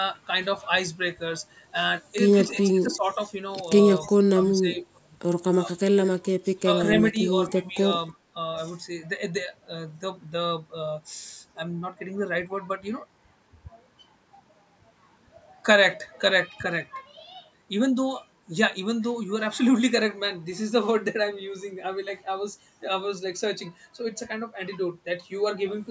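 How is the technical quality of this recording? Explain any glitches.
The speech has two linked call faults clustered in the first eight seconds: faint echo leak and speech suppressed in double talk. The call's microphone processing leaves nothing above 8 kHz.

Echo leak, from 2.53 to 2.96 s and from 4.05 to 4.10 s: a faint, delayed copy of speech trails by 291 ms, about 30 dB and then about 25 dB below the main speech. This is likely a loudspeaker echo that the echo canceller failed to fully remove. On a spectrogram it appears as a weak ghost of the speech harmonics shifted 291 ms later. In the waveform it is a low smear rather than a distinct burst.

Speech suppressed in double talk, at 2.56–3.19, 4.08–4.15, 4.46–4.98, 6.43–6.66, 7.12–7.16 and 7.52–7.77 s: the speech level dips by roughly 5 to 15 dB, from brief nicks to stretches of about a third of a second. The canceller, likely unable to separate the talker from the overlapping echo, turned both down. 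The waveform envelope shows sudden notches, and the spectrogram shows the harmonics fading in bands.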